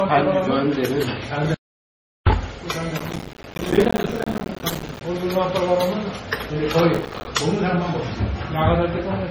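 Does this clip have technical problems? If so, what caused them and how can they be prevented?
Yes. Transcoding between lossy codecs runs throughout: swirly, smeared artefacts from two different encoders are heard together, and a spectrogram shows a hard ceiling at 16 kHz. This likely comes from a low-bitrate MP3, around 32 kbit/s, re-encoded to Vorbis at around 29 kbit/s. To prevent it, encode once from the original source.

An audio dropout to silence runs from 1.54 to 2.27 s. The sound cuts abruptly for about 0.72 s, and the waveform shows a flat line of silence with no room tone. It is likely caused by a lost input connection or a stray mute while recording continued. To prevent it, secure cables and links and monitor input levels.

Processor overload crackle appears from 2.98 to 5.01 s and again from 6.94 to 7.27 s. The processor missed many short buffer deadlines in a row, with each buffer a few milliseconds long, and each missed buffer became a tiny silent gap. 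On the waveform these show as dense hard-edged notches, and the spectrogram shows broadband vertical streaks. To prevent it, lower the CPU load or increase the buffer size.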